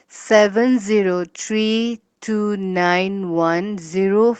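No technical faults can be heard anywhere in this speech clip. It sounds like it passed through a working call path, with the high frequencies stopping at about 8 kHz, which fits an Opus codec running at a modest bitrate.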